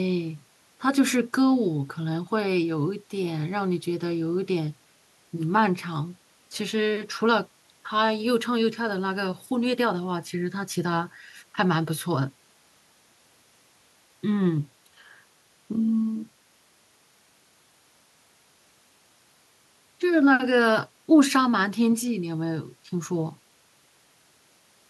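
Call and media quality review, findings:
No faults found in this speech recording.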